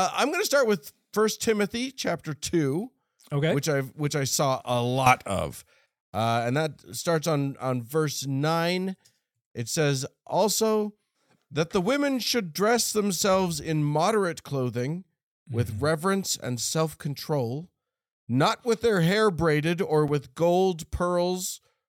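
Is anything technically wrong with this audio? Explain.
Yes, there are two faults.

Sudden gain jump, 5.06 to 5.86 s: the level likely changed in one step with no ramp, as when a gain setting or bit shift is applied instantly. Right after "which I saw a", the speech and the background noise rise together by about 10 dB. They stay at that level for roughly 0.8 s, then drop back just before "uh and."

Block of digital silence, 20.08 s: a run of zeros lasting 5.8 ms was played. This fits a 256-sample buffer that was either not filled in time or was filled with invalid values. Because the gap is so short, it is heard as a tick or dip rather than silence, between "their hair braided or" and "with gold."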